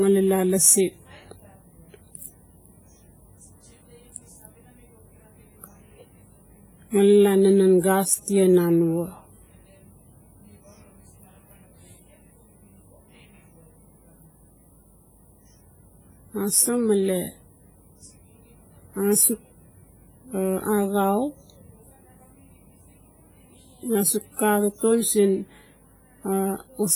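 Throughout, the speech rings and sounds washy, with hiss breathing along with it. This heavy damage likely comes from WMA compression near 24 kbps.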